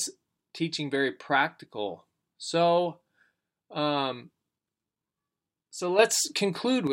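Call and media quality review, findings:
Speech and background noise step up together by about 6 dB at 5.99 s, holding to 6.87 s. Sudden gain jump: likely a digital gain setting or bit shift applied between adjacent samples with no ramp, so level changes instantly.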